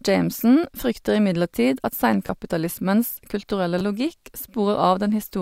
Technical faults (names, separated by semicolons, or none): repeated buffer